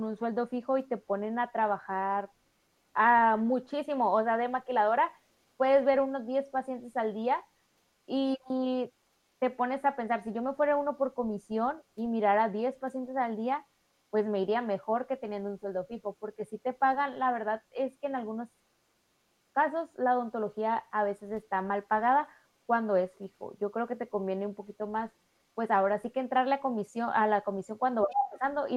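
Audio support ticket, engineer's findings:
Speech suppressed in double talk, 28.04 to 28.43 s. Talker's speech dips sharply, roughly 20 dB at worst, for around 0.4 s. Likely the echo canceller: both sides active, it could not separate near speech from loudspeaker echo and attenuated everything.

Other side's voice leaking through, 28.1 to 28.29 s. Far-end speech audible in the mic path, about 10 dB below the talker. Likely incomplete echo cancellation: loudspeaker playback reached the microphone and was not fully removed during the overlap.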